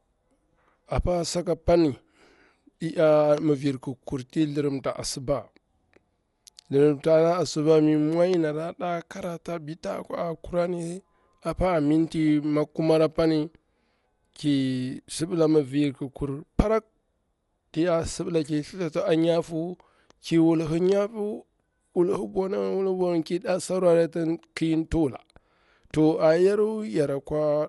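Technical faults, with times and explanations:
throughout, Dolby Digital compression: the speech was likely encoded with AC-3 at a low rate that fits about 64 kbps, so the band stops near 11.5 kHz and starved frequency lines are refilled with noise, leaving it dull with plainly audible rough, fluttering grain.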